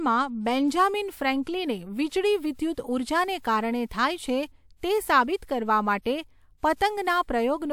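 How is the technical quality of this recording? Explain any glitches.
The recording has one audible glitch, a pre-echo from lossy compression, between 3.39 and 3.44 s. A transform codec encoded a block that contained a sudden attack near its end. The coarse quantisation noise it allowed for the loud attack was spread across the whole block, including the quiet stretch before it. That noise shows up as a short hiss about 57 ms ahead of the attack, which makes the onset sound blurred and less crisp.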